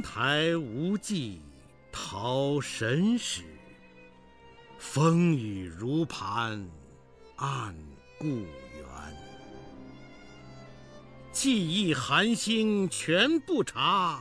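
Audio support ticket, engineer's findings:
Repeated buffer, 2.0–2.04 s: short buzzy stutter, same tiny slice played twice more with hard joins. Output buffer underrun; device re-sent its last block, which fits a 20 ms buffer. Roughly 40 ms of audio skipped.

Repeated buffer, 12.94–13.0 s: longer stutter, three extra repeats. Same underrun mechanism, same buffer size; roughly 70 ms of audio lost.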